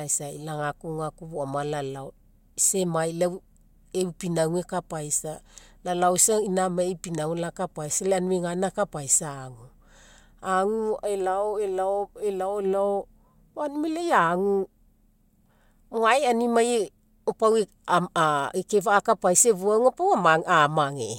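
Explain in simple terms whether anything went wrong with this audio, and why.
Nothing went wrong with this recording. The speech comes through steadily the whole way, with no dropouts, glitches or other faults to point to.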